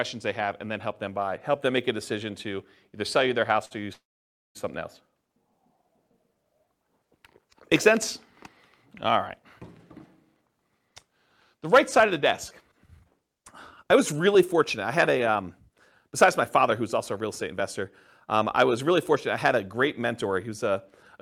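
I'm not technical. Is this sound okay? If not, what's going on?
No. Around 3.65 s, one piece of the call's audio arrived late, and the receiving end ran out of sound to play. This is a short stall from a late packet. To cover the gap, the phone stretched the last bit of sound by about 55 milliseconds until the missing piece turned up, then carried on. You hear a sound held slightly too long, ending about 3.73 s, with nothing actually lost.

Shortly after, from about 3.93 s to 4.57 s, the audio stops for roughly two thirds of a second. That is a call audio freeze, likely caused by a batch of audio pieces getting held up on the way. The last sound trails off briefly, and then about 0.56 s of silence follows. When the audio resumes, it picks up exactly where it left off, so the speech is delayed rather than cut.

Later, the receiver had more audio stored than it wanted, so it caught up by quietly trimming tiny slivers out of the speech. 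This is a jitter buffer speed-up. It runs from 9.97 s to 12.02 s about 6% fast, from 12.72 s to 18.91 s about 5% fast, and from 19.67 s to 21.17 s about 4% fast. The voice stays at its normal pitch, and the first two stretches sound slightly rushed.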